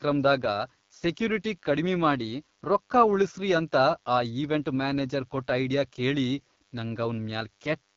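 From start to finish a thin, steady buzz sits faintly under the speech, about 40 dB below it, pitched at 100 Hz and rich in harmonics. This is DECT cordless phone buzz: a nearby handset or base station transmits a radio burst every 10 ms, and the audio circuitry rectifies those bursts into audible sound.

Throughout the clip the speech also sounds rough and raspy, with a gritty, synthetic edge, and nothing is present above 7.2 kHz. That is the AMR wideband (HD Voice) codec running at a low rate. The plainly audible damage fits its 8.85 kbit/s mode, where the pulse-driven vocal tract model is too coarse to render the speech cleanly.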